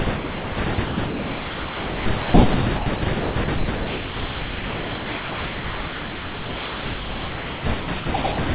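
Speech runs choppy from 0.16 to 8.38 s: quiet stretches and word edges drop out and get filled with synthetic comfort noise, about 6.3 s of it in total, with real room noise (about 24 dB under the speech) in the background. That's likely sound chopped by the voice detector on the sending side, switching transmission on and off repeatedly, all heard through a G.711 call path that tops out at 4 kHz.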